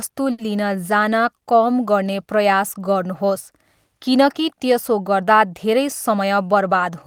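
A speech recording with two timing faults from the receiving end of a network call. From 0.31 to 0.41 s there is a short stall from a late packet: the jitter buffer ran dry, and the receiver held the last sound for about 70 ms until the packet came, then resumed exactly where it left off. Nothing is lost, which separates this from packet-loss concealment, where the filler replaces missing audio and the sound skips ahead afterward. Instead, one sound lingers with a faint buzz or dip, and the playout delay grows by about 70 ms. Near the end, from 6.10 to 6.90 s, a jitter buffer speed-up plays the audio at 109% of its normal rate. The receiver trimmed many tiny pitch-period slices, roughly 70 ms in total, to shed that extra delay. Pitch stays put, unlike a resampling or tape-speed error, and there are no audible gaps as with dropouts. The speech simply sounds hurried.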